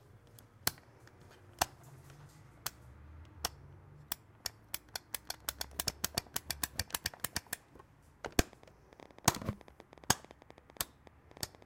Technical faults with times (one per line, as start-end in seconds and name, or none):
8.53-11.63 train of clicks